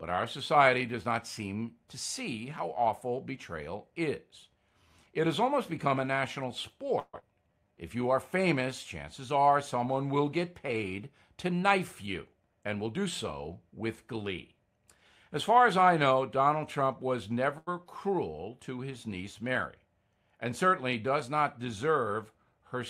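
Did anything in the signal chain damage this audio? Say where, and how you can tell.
Yes. A long network dropout, likely a run of lost packets, runs from 6.99 to 7.24 s. The speech turns into a fading buzz for about 224 ms and ends in roughly 30 ms of silence. About 120 ms of audio never returns, and the playout delay moves by around 40 ms.

A jitter buffer slow-down follows from 7.34 to 8.03 s, right after that gap. The receiver repeats pitch periods to refill its reserve, adding 106 ms. The speech plays at 86% speed with unchanged pitch, so sounds drag.

A jitter buffer speed-up appears from 11.48 to 13.05 s at 109% speed, cutting roughly 150 ms. It appears again from 22.38 to 22.77 s at 111%, cutting about 50 ms. The buffer is trimming pitch-period slices to shed excess delay, so the speech sounds hurried without any rise in pitch.

A short stall from a late packet occurs at 17.58 to 17.69 s. 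The buffer ran dry, and the receiver held the last sound for 88 ms. It then resumed where it left off, so nothing is lost, but the delay grows by 88 ms.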